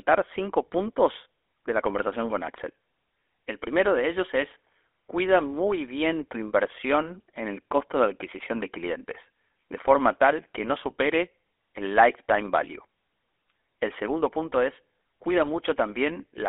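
Speech carried throughout by the GSM full-rate codec: the band is confined to roughly 300 Hz to 3.5 kHz, and a plainly audible buzzy, gravelly roughness comes from coarse pulse-train excitation of a vocal-tract model, consistent with the 13 kbps full-rate coder.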